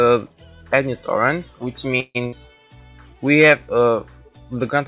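Audio carried over a narrowband call path, with nothing above 4 kHz, which fits G.711 mu-law coding, shows two faults close together. At 2.00 s a call audio freeze begins and lasts until 2.17 s. The receiver holds up the last sound for about 147 ms as a fading buzz or hiss that drops to silence for the final 20 ms, most likely because packets were delayed and the jitter buffer ran dry. Playback then resumes where it stopped, so nothing is lost, but everything after it arrives about 147 ms late. A burst of packet loss follows from 2.27 to 2.34 s. The receiver bridges it with about 54 ms of concealment, a held, decaying continuation of the preceding sound, and then jumps ahead. About 60 ms of the original audio is missing at that point.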